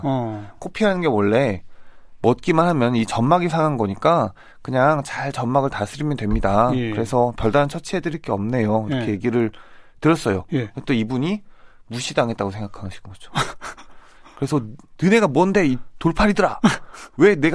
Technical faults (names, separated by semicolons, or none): none